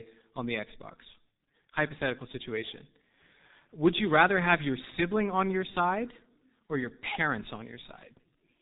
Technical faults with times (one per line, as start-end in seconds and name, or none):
0.00-8.62 G.723.1 codec